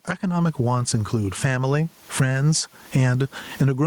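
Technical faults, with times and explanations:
Throughout, gain pumping: the gain swings around 20 dB, with the room noise about 44 dB below the speech, and the speech sounds squashed. The likely cause is microphone gain set far too high, with a fast limiter clamping it down.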